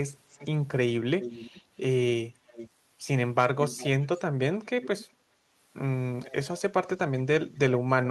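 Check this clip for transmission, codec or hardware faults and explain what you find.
There is one fault, an echo leak, heard five times in this speech: at 0.29–0.47 s, 1.21–1.61 s, 2.48–2.7 s, 3.61–4.2 s and 4.82–4.88 s. Each time a delayed copy of the speech trails the original by about 0.41 s, sitting roughly 10 to 20 dB below it, loudest at 1.21 s and 3.61 s. The likely cause is a far-end loudspeaker whose echo canceller let part of the microphone pickup through, returning it down the call path. Room reverberation would decay smoothly from the sound itself. These are discrete copies at a fixed lag that arrive in scraps, under a top end that stops near 12 kHz, which fits a band-limited Opus call codec.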